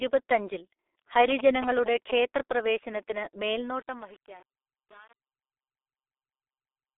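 Throughout, the speech carries G.723.1 codec damage: nothing above 3.8 kHz, a hoarse, muffled tone and smeared consonants, which fits a very low bitrate near 6 kbit/s, unlike plain band-limiting.

From 1.30 to 2.12 s, GSM signalling bursts appear: rectified radio pulses give a galloping dit-dit-dit of short buzzes at 217 Hz, only a few dB below the speech, not steady hum.

From 3.43 s to the end at 6.98 s, as the level fades out, truncation distortion on a fade makes the tail gritty, pointing to roughly 7-bit undithered steps rather than ordinary noise.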